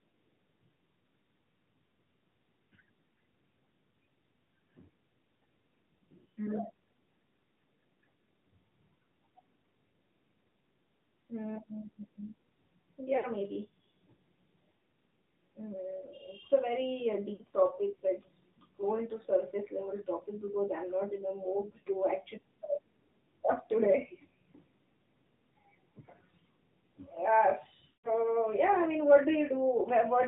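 Throughout, AMR narrowband mobile codec coding at 10.2 kbps confines the speech below 4 kHz and adds plainly audible buzzy, synthetic coloration from the pulse-excited vocal tract model.

Lost AMR speech frames occur at 13.18 to 13.26 s and 17.34 to 17.42 s, each about 60 ms, giving brief warbles. At 27.88 to 28.12 s a 160 ms run smears the sound into a fade toward silence before it returns roughly.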